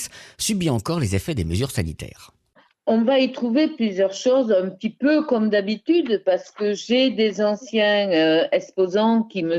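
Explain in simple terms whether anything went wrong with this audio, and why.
Nothing went wrong that I could hear; listening closely, no problem stood out at any point in the recording.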